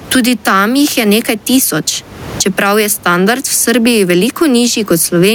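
Speech with the input gain likely set far too high, so a fast limiter clamps the level on every loud passage, causing gain pumping throughout. The room noise sits about 31 dB below the speech, and the gain swings by around 15 dB, squashing the dynamics.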